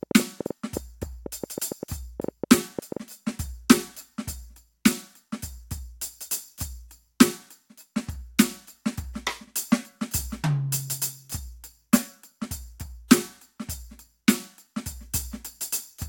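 From 0.03 to 2.98 s, a train of clicks, roughly twenty irregularly spaced pops at about 6.8 per second, likely external interference. They show as thin vertical lines spanning all frequencies, spiking well above the music.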